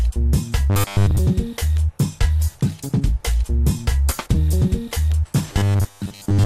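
Throughout, the audio is dull with a gurgling, granular grain and upper bands that flicker in and out. This is likely MP2 compression at a low bitrate, around 80 kbps, where too few bits leave high sub-bands switched off and the rest coarsely quantised.

From 0.70 to 1.19 s, and again from 5.53 s to the end, the sound turns into a rigid metallic buzz at 100 Hz. This is robotic sound from repeated short buffers, likely caused by audio arriving too seldom. A roughly 10 ms chunk repeats in place of most of the real signal.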